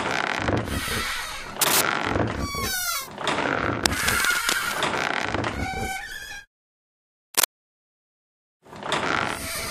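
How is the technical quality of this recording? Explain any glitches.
The recording has three bursts of cable scratch noise, at 1.61 to 1.81 s, 3.86 to 4.92 s and 7.34 to 7.51 s. These are most likely from a worn cable or connector being moved, so its contact resistance jumps about and injects ragged noise. The two short bursts sit above the sound by about 5 dB and come across as harsh scratches. The longer middle one is quieter, about 5 dB below, and rustles underneath for about a second.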